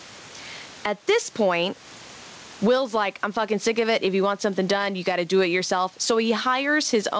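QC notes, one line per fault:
throughout, gain pumping: the gain swings by around 15 dB, with the room noise about 34 dB below the speech. This is likely input gain set far too high, with a fast limiter or compressor clamping down on every loud moment, so loud and soft parts are squeezed together and the speech sounds flattened. The band stops at 8 kHz, which fits a G.722 call codec.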